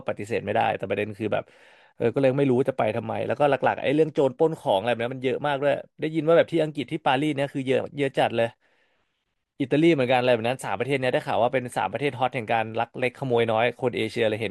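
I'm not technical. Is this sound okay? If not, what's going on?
Yes, no faults heard here.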